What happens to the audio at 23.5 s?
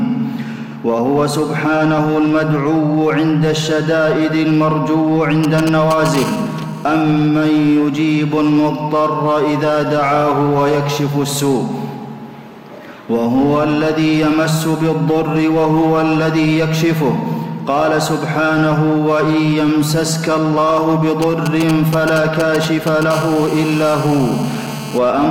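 At 23.5 s a GSM phone buzz is present. It runs from about 23.13 s to 24.98 s. A nearby 2G phone transmits in short radio bursts, here at 217 per second. The audio circuitry rectifies those pulses into sound. The result is a hard, raspy buzz at 217 Hz, rich in harmonics and unrelated to the audio. It sits about 16 dB below the signal. It holds nearly steady, as during a call.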